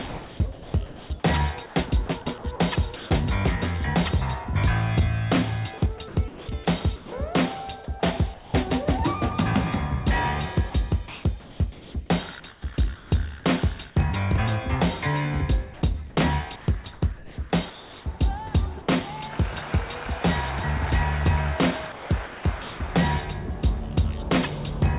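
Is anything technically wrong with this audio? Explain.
Yes. Four stretches, 0.08–3.1 s, 5.78–7.12 s, 10.7–13.12 s and 21.92–22.8 s, show sound chopped by the voice detector. The sender likely toggled transmission repeatedly, so quiet edges were swapped for comfort noise, totalling roughly 1.2 s, 0.5 s, 0.9 s and 0.5 s. The result is choppy.

Comfort noise in place of the background appears at 8.34–8.54 s and 15.74–18.06 s. With nothing likely being sent, the receiver fills the gap with steady, featureless generated noise instead of the real background. In the first gap it sits about 20 dB under the loud parts and drops by about 5 dB.

At 16.84 s, sound dropped by the voice detector takes out 20 ms. A faint passage was likely judged to be background, transmission stopped briefly, and generated noise replaced it before the sound resumed.

The call path behind this carries nothing above 4 kHz, which fits a G.711 A-law codec at 64 kbps.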